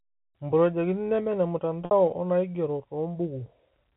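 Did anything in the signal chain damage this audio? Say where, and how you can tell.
Yes, at the network stage: packet loss with pitch repetition at 1.85 to 1.91 s. The 60 ms gap holds a slightly buzzy, repeated pitch period instead of the silent hole of a plain dropout.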